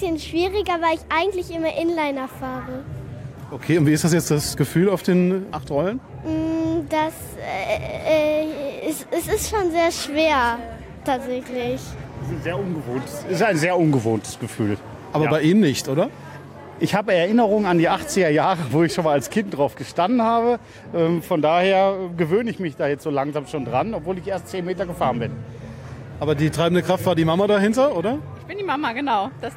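No technical faults are audible anywhere in this audio.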